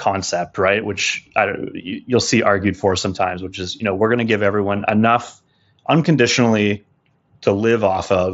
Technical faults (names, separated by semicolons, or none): none